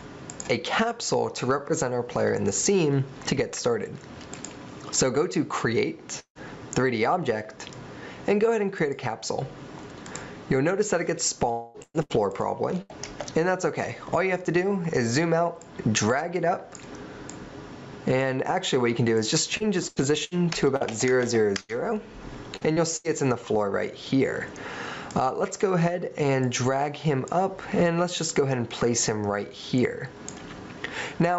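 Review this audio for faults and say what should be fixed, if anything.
Gain pumping runs through the whole clip. The input gain is likely set far too high, so a fast limiter clamps down on every loud moment, with swings of roughly 20 dB. The dynamics are left flattened and squashed. Lowering the microphone gain so the limiter rarely engages would prevent this.

A long network dropout occurs at 6.19–6.38 s and again at 11.51–11.77 s, where incoming audio likely stalled. At 6.19 s about 160 ms is lost: the receiver stretches the last sound into a fading buzz, then leaves roughly 90 ms of silence. At 11.51 s about 240 ms is lost, and the synthetic fill covers the whole gap. Audio resumes afterwards with that stretch gone. A more stable connection or a deeper jitter buffer would prevent these.

Repeated packet loss gives a robotic, choppy sound at 11.82–12.92 s, with three holes, the longest 118 ms, and about a quarter of the span concealed. 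It returns at 19.57–23.07 s, with eight shorter holes up to 81 ms, about 13% concealed. Each hole is patched with a continuation of the last sound before the next one arrives. Fixing the underlying packet loss on the network, or adding forward error correction, would prevent it.

The high-frequency ceiling at 8 kHz comes from the call codec's bandwidth and isn't a fault.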